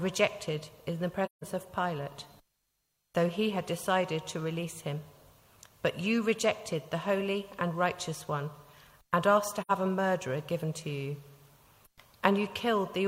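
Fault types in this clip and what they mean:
AAC frame loss with muting: The decoder lost blocks of coded audio and replaced their spectrum with silence, while the overlapping transform windows taper the level down and back up at each edge. Two soft-edged holes appear, from 1.25 to 1.44 s (about 171 ms, fitting four lost frames) and from 9.61 to 9.71 s (about 85 ms, fitting two). On a spectrogram, each is a full-band blank column with blurred sides. On a waveform, the envelope fades to zero and recovers.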